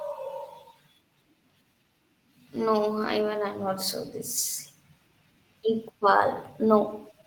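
At 3.05 s, several separate packets went missing, and the decoder filled each hole with the low-bitrate copy carried in the following packet, a lost packet rebuilt from error correction. The repair runs to about 3.23 s and points to roughly five packets, some 100 ms of speech, rebuilt this way. Nothing drops out, but that stretch turns audibly rougher and noisier, a coarser texture that clears once normal packets resume.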